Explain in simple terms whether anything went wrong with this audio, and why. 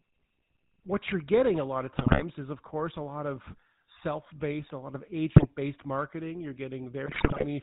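The speech went through the old GSM full-rate codec, which rebuilds the voice from a rough model and cuts everything above 4 kHz, so it sounds buzzy, gravelly and muffled throughout.

GSM bit errors corrupted parts of the received signal, so the decoder briefly produced squawks, pops and gargling: from 1.96 to 2.24 s, between "getting a lot of" and "is of course a"; from 5.32 to 5.45 s, just after "a lot of"; and from 7.06 to 7.45 s.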